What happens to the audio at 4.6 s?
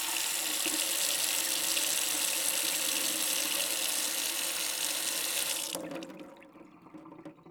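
The sound freezes for just over a millisecond at 4.56 s, holding flat before resuming. This is an underrun with held sample: the output buffer ran dry, so the converter held its last value. The gap lasts 64 samples, and about 1.5 ms of audio was lost in the meantime.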